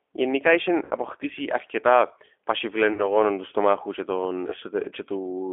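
The whole clip is speech carried through the G.729 codec at 8 kbit/s. The line passes only about 300 Hz to 3.5 kHz. The codec rebuilds each frame from a vocal tract filter and a few pulses. The damage is plainly audible: thin, rough and slightly synthetic.

At 0.85 to 0.92 s, about 60 ms of audio is lost. This is VoIP packet loss concealed by the speech codec. The decoder repeats its last pitch and filter at falling gain, so the sound smears into a fading buzzy tone or coloured noise. Another loss of about 40 ms follows at 2.93 to 3.16 s. Because each frame builds on the previous one, the sound stays weak or distorted for tens of milliseconds or more after the gap. A last, shorter loss of 20 ms comes at 4.50 to 4.56 s.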